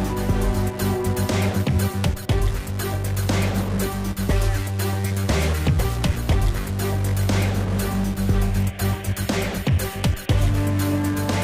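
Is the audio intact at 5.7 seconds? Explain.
Yes, at 5.7 seconds the audio is intact, with no dropout, click, distortion or other fault to be heard there.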